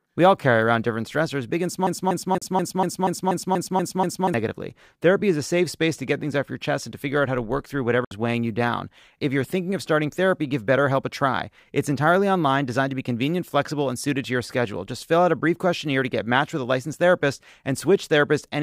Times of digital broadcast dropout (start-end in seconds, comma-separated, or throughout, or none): 2.38-2.42, 8.04-8.11